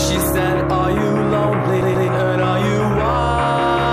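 From 1.81 to 2.08 s the CD is stuck on one turn: the laser jumps back a track, replaying a 135 ms loop twice with a short mute at each jump.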